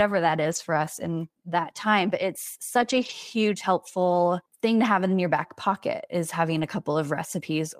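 Speech clip with three short stretches where lost packets were rebuilt from error correction: 0.51–0.57 s just before "for us in that", 2.81–3.11 s just before "helpful thing to have", and 6.57–6.63 s just after "your back pocket is". There is no gap, but each stretch sounds rougher and noisier. The decoder is playing the low-bitrate copies carried in the following packets. The rebuilt spans of 40 ms, 160 ms and 40 ms fit runs of 20 ms Opus frames.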